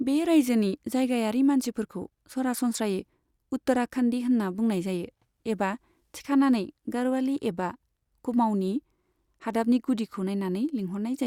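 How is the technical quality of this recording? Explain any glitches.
There's nothing to flag here, as the speech comes through without a single glitch worth explaining.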